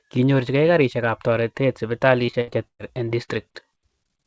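From 2.26 to 3.34 s, right after "karishekap toreteet", the speech breaks up with repeated packet loss, giving that robotic sound. Packets keep going missing, and each hole gets papered over by stretching the last bit of audio before the next one hits. Roughly a quarter of the stretch is concealed, with the longest gap around 112 ms, so it comes out choppy. It all sits on a call path that points to a G.722 codec, with nothing above 8 kHz.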